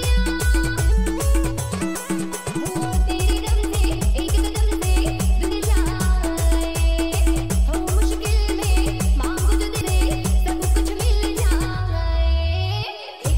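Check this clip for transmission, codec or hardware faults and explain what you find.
Two kinds of fault turn up: damaged data in a compressed stream at three points, and one time-stretched section.

Damaged data in a compressed stream, at 0.91 s, 5.51 to 5.53 s, and 9.80 s: corrupted bytes make the decoder lose frame sync and hunt for the next header, so each spot gives a brief chirp or blip.

Time-stretched section, 2.49 to 4.83 s: the pace jumps to about 1.38 times normal while the pitch holds, sounding rushed, likely from software dropping short pieces to shorten the passage.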